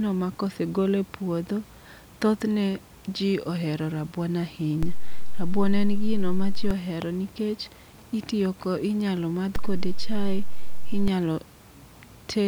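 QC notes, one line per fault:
4.83–6.71 s and 9.56–11.08 s: DC step. The zero line of the waveform jumps by about −17 dBFS at 4.83 s, holds, and returns at 6.71 s; the same happens again from 9.56 s to 11.08 s. Each sudden shift of the baseline is a near-instantaneous edge carrying low-frequency energy, so it is heard as a low thump at every onset and return. The speech itself continues unaltered on top of the displaced baseline.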